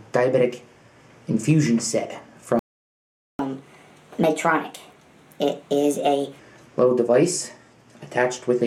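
At 2.59 s the sound stops dead in mid-flow. Silence holds for 0.8 s, until 3.39 s. Then the audio picks up again. This is a playback stall. The player likely ran short of data, or its output thread was held up, so nothing reached the output until it recovered. The gap is long enough to hear as a clear break, not a click.

From 3.39 s to 6.39 s comes catch-up at higher speed. The player works through the backlog it built up during the stall. It does this by resampling at 1.25 times normal speed. Because speed and pitch are tied together here, everything sounds hurried and raised by about four semitones. At 6.39 s most of the lost time has been won back. Speed and pitch then drop back to normal.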